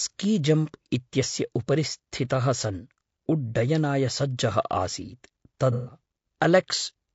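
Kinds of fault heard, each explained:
Low-delay AAC compression: The speech sounds rough and grainy throughout, with noise filling the gaps between harmonics and a thin, artificial top band. This is likely low-delay AAC coding such as AAC-ELD. Its short frames resolve pitch poorly. The damage fits a low bitrate around 32 kbps.
AAC frame loss with concealment: From 5.72 to 5.97 s the sound turns smeared and noisy for about a quarter second. Coded frames went missing there, which points to roughly five lost frames. The decoder patched the gap by reusing the last good spectrum.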